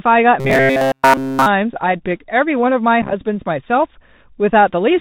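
The Bluetooth CVSD headset codec runs through the whole clip, which fits a 64 kbps CVSD link. Its one-bit up-or-down coding passes nothing above 4 kHz, so the speech is muffled, s sounds turn scratchy, loud bright moments distort, and a granular hiss sits underneath.

Robotic sound from repeated short buffers runs from 0.40 to 1.47 s. Essentially all of that stretch is replaced by repeats of one short slice, which forces a rigid 134 Hz metallic buzz that only loosely tracks the speech. That buzz fits a buffer of about 7.5 ms, likely replayed because fresh audio arrived too seldom.

Unconcealed Bluetooth headset packet loss hits between 3.02 and 3.13 s. Several short voice packets went missing, about 45 ms of audio spread over 90 ms with no run longer than 7.5 ms. The gaps were filled with silence or an idle pattern, so the speech crackles and sounds chopped there.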